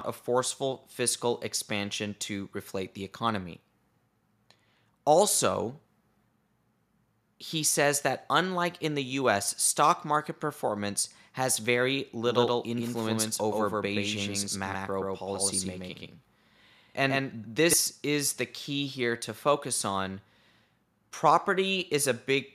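From 12.25 to 17.73 s the speech plays twice, a doubled audio track. A second copy, about as loud, trails by roughly 150 ms. It likely comes from a slower second capture path. The copy is dry and starts and stops abruptly.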